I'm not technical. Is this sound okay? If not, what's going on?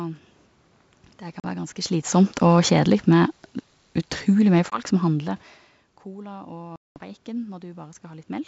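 No. There are two kinds of fault in this speech.

Packet loss on an ADPCM call: short silent holes at 1.40 s, 4.70 s and 6.76 s, about 40, 20 and 200 milliseconds long. Afterwards the decoder briefly loses track, so the voice returns with a click or roughness.

Automatic gain falling, then rising: from 1.92 to 5.43 s the volume control turns itself down, so voice and background sink together. From 6.04 to 8.43 s it turns itself back up, and both swell again.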